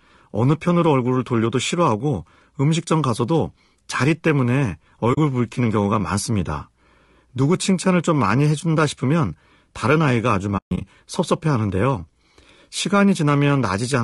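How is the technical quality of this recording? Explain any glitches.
The quality is limited. The voice is compressed throughout and has two brief dropouts.

Low-delay AAC compression is audible for the whole clip. The voice sounds rough and grainy. There is noise between the harmonics, and the top band sounds thin and synthetic. This is likely AAC-ELD, the short-frame codec of video calls, at a low bitrate around 32 kbps.

AAC frame loss with muting occurs twice. At 5.13 s, a 40 ms hole appears. From 10.57 to 10.82 s, about 180 ms goes missing in scattered gaps, the longest around 150 ms. Lost frames were decoded as silence. Overlapping windows fade the edges, so the holes sound soft.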